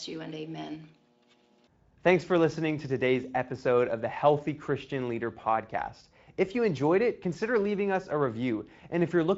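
At 5.41 to 5.44 s, a brief VoIP packet loss concealed by the speech codec, consistent with a single 20 ms frame missing. Instead of a silent gap or click, the decoder repeats its last pitch and filter, giving a buzzy or noisy smear that fades before the lightly coded Speex speech recovers.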